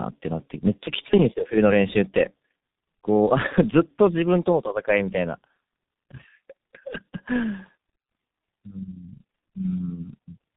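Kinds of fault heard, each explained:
Tandem speech coding: The speech has passed through two low-rate speech coders in sequence, with a plain telephone-band link between them, so it was decoded and re-encoded at each boundary and the second coder worked on the first coder's artefacts. Throughout the clip this gives a rough, warbly, muffled sound beyond what one coder would leave. There is nothing above 3.8 kHz, and the coarse texture fits a final G.723.1 stage at around 6.3 kbit/s.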